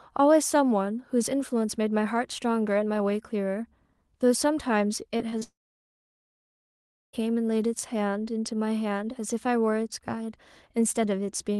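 At 5.17 to 5.21 s, 5.29 to 5.36 s and 5.39 to 5.43 s there are three short concealed packet losses. Each time about 20 ms of the call arrived too late or not at all. The decoder patched the gap by extending the preceding sound, then faded back in. Each one is a quick smear or wobble in the speech. The second patch stretches slightly longer.

From 5.43 s to 7.15 s the sound cuts out. This is likely a long network dropout. About 1.7 s of audio never arrives. A brief fading continuation follows the last packet, then about 1.6 s of near silence. The speech resumes at 7.15 s. What was said in that gap is simply gone. The call's band limit sits near 12 kHz.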